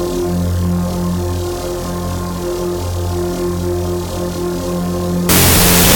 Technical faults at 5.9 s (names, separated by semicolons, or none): wrong sample width